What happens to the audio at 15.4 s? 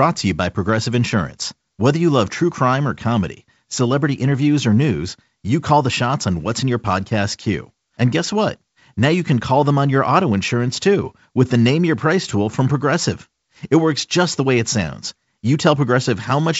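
Nothing goes wrong at 15.4 s; the speech there comes through intact over the G.722 wideband telephone coding.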